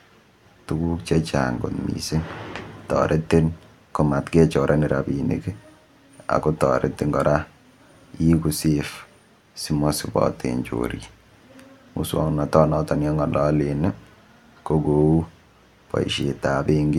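No audible technical fault in this speech recording; the signal path shows no dropouts, clipping, glitches or level problems anywhere in the clip.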